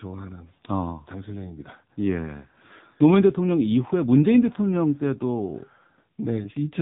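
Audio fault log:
throughout AMR narrowband mobile codec: heavily buzzy, synthetic speech fitting a rate near 6.7 kbps; the spectrogram shows a hard ceiling, nothing above 3.8 kHz.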